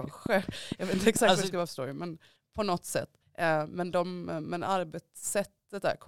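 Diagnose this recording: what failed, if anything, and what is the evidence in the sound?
A train of clicks runs from 0.04 to 1.17 s: around seven similar ticks at a steady 4.5 per second, peaking about 15 dB above the speech. A pulse that regular likely comes from nearby equipment coupling interference into the analogue wiring.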